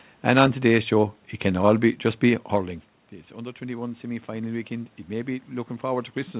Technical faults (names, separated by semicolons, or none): automatic gain rising